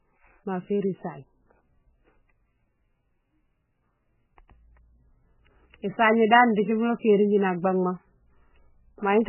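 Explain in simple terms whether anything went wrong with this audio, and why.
From start to finish the speech is muffled, with nothing above 3 kHz, and sounds watery and swirly, likely from heavy MP3 compression discarding detail to save data.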